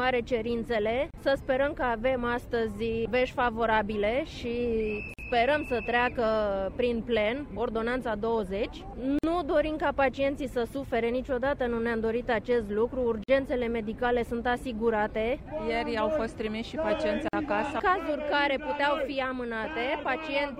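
Gaps at joins of encoded pieces fall at 1.11, 5.14, 9.19, 13.24 and 17.28 s, every 4 s. Separately encoded segments were butted together untrimmed, so encoder start delay and last-frame padding leave silences, 32 ms first, then 49 ms, with smeared edges before the sound resumes.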